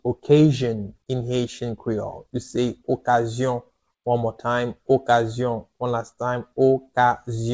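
Nothing is technically wrong with this audio, which comes through a G.722 call path at 64 kbps that carries nothing above 8 kHz.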